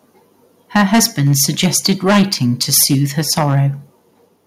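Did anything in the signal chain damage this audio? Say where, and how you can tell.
Yes. From 0.75 to 3.6 s the loudest peaks are flattened, giving a harsh, crackling edge. That points to microphone overload at the converter: input driven roughly 12 dB past full scale, most likely, so around one in twenty samples hit the limit and lost their tops.

At 0.77 s, right as the distortion begins, the whole level drops by about 2 dB in a single step, background included. This is a microphone volume step-down in the call processing, likely the software reacting to the clipping by cutting the device's input gain at once.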